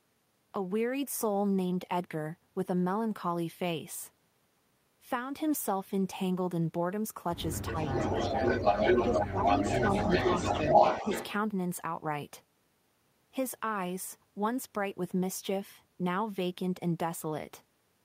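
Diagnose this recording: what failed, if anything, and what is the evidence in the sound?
Call processing failed during double talk: with both sides talking, the echo canceller likely could not separate the local talker from loudspeaker echo and attenuated both. The result is speech suppressed in double talk, with dips of about 5 dB at 7.71–7.77 s and 9.08–9.82 s.

Call processing also let an echo leak through. A speakerphone's echo canceller likely failed to remove all of what its microphone picked up, and the remainder was sent back. From 7.84 to 11.28 s, a copy of the speech trails 441 ms behind, within roughly 5 dB of the speech level.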